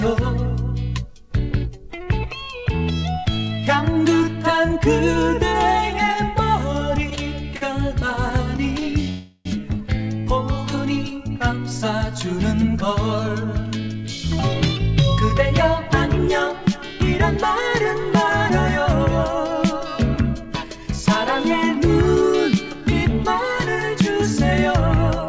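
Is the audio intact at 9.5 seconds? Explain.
No, not quite. There's a call audio freeze from 9.09 to 9.47 s, likely from delayed packets draining the jitter buffer. The last sound smears into a fading buzz or hiss with a brief silence, then resumes where it stopped, nothing lost, just 360 ms late.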